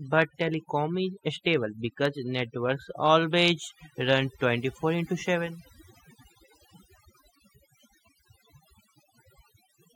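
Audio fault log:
throughout: overdone noise removal. The noise reduction on this noisy speech recording was set too strong, so it pulls individual frequency bands far down or cuts them entirely whenever they sit close to its noise estimate. Quieter parts of the voice fall below that line and vanish with the noise. The gaps between phrases drop to near silence scattered with twinkling specks.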